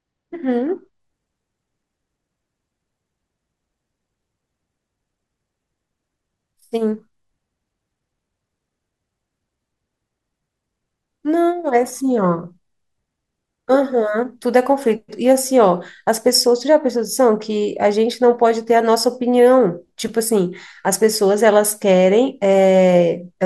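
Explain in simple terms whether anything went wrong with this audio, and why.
For the first second, from 0.0 to 1.0 s, the speech sounds dull. This is channel delay (comb filtering): one side arrives a tiny fraction of a millisecond late, so mixing them cancels treble around 10 kHz. Unlike an echo, no repeat is heard.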